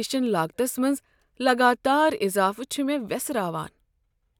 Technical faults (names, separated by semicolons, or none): none